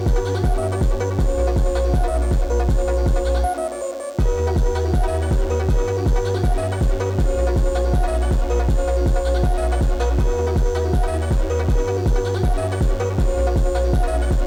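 From start to finish a DECT cordless phone buzz sits under the sound, roughly 30 dB below it. A nearby DECT handset or base transmits a short radio burst every 10 ms, and the audio circuitry rectifies those bursts into a 100 Hz pulse train. Mains hum is a smoother tone at 50 or 60 Hz. This is a thin, rasping buzz, rich in closely spaced harmonics, and it holds perfectly steady throughout.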